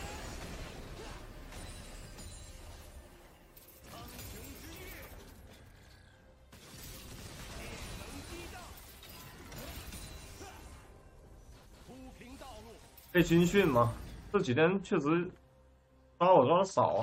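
No technical faults can be heard anywhere in the clip.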